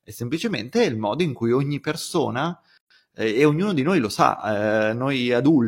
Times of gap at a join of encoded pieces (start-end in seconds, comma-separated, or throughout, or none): 2.77-2.90